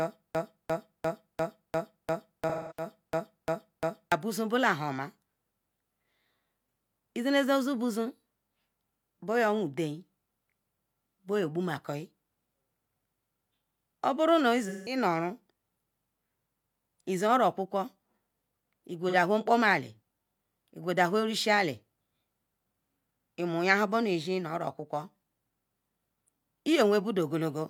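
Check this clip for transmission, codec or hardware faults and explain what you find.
Two faults are audible: a broken-record loop at the start and three patches of AAC frame loss with concealment.

From 0.0 to 4.1 s, the stream was likely stalled and kept resending the last fragment it held. The loop is already under way when the clip begins. A 348 ms slice of speech repeats exactly, back to back, about eleven times, so the sound stutters mechanically in place. Whatever should have played during those four seconds is gone.

The AAC decoder lost frames three times and filled each gap from the last good spectrum. At 2.49 to 2.85 s, inside the loop, about 213 ms goes missing, which points to roughly five frames. At 14.68 to 14.97 s the gap is about 171 ms, and at 19.08 to 19.14 s it is about 43 ms, consistent with a single frame. Each gap is heard as a brief smeared, noisy or phasey patch in place of clean speech.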